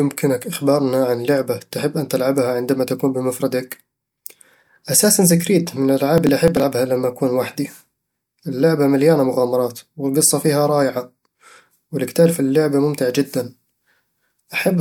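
Processor overload crackle runs from 6.18 to 6.63 s, between "أساسنز كريد من" and "لما أكون لوحدي". The processor falls behind and misses a string of buffer deadlines, roughly ten of them, which fits buffers of around 10 ms. Each late buffer is simply skipped, leaving a short hole with hard edges. Strung together, these holes ride on the speech as a burst of gritty, tearing crackle that stops once the load eases.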